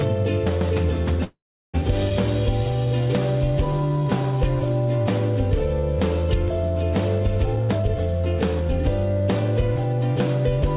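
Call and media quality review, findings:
Call audio freeze, 1.24 to 1.76 s: last sound smeared into a fading buzz, then about 0.38 s of silence, audio resumes where it left off. Likely jitter buffer underrun from held-up packets.

Skip ahead at 2.1 s: roughly 150 ms dropped, near-seamless splice. Jitter buffer discarding late or overflowing audio.

Jitter buffer slow-down, 3.65 to 4.99 s: runs at 93% speed, same pitch, sounds drawn out. Receiver repeated pitch periods, adding 104 ms to rebuild reserve.

Jitter buffer speed-up, 7.46 to 10.63 s: hurried, 114% speed, pitch unchanged. Buffer trimming short pitch-period chunks, about half a second gone, to cut delay.

Band stops around 4 kHz throughout, which fits a G.711 A-law path at 64 kbps.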